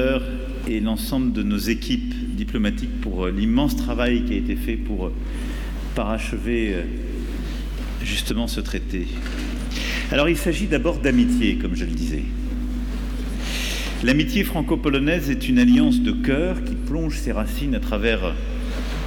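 A steady low 50 Hz tone, nearly as loud as the sound itself, runs throughout: mains hum, power-line current leaking through a ground loop or transformer.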